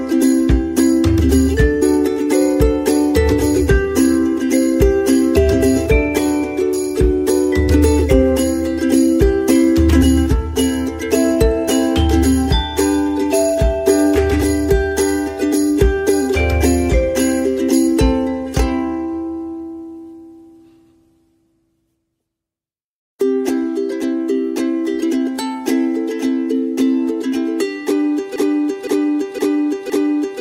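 From 28.36 s to the end, a 0.51 s fragment repeats four times back to back, identical each pass, like a stuck record. This broken-record loop is likely a stalled player or stream resending its last fragment, so the intended audio there is lost.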